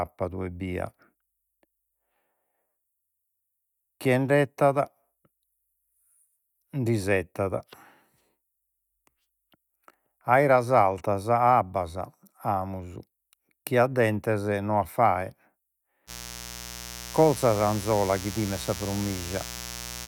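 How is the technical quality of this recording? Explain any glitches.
The recording has one clear problem: a mains buzz that comes in at 16.06 s and runs right to the end. Something like a dimmer, a rectifier or a poorly shielded cable is letting sharp switching spikes into the signal twice per cycle of the 60 Hz supply. Those spikes carry a stack of harmonics reaching up into the kilohertz range, so it's a steady, raspy buzz rather than a soft hum, sitting about 15 dB below the speech.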